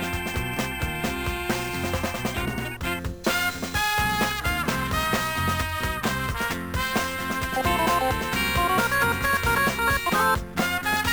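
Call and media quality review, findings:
Imaging from sample-and-hold upsampling, whole clip: bright metallic fizz tracking the level. Likely the resampler, which points to a 22 kHz source stepped up to 44.1 kHz by repeating samples unfiltered. The mirrored copy sits at 11 to 22 kHz, about 18 dB down.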